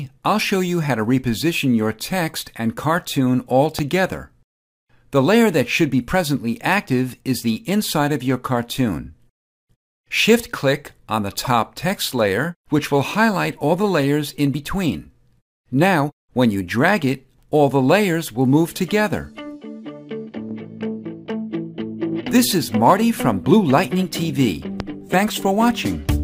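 At 3.79 s, a sudden voltage step enters the signal chain, likely from a plug, switch, static discharge or driver glitch. It produces a sharp loud pop about 15 dB above the surrounding sound, which carries on underneath. The same kind of pop returns at 24.80 s.

Between 11.44 and 11.47 s, the decoder plays a 24 ms slice of compressed audio a second time, which fits one repeated frame being written or sent twice. This is heard as a brief stutter, and it lengthens the audio by 24 ms.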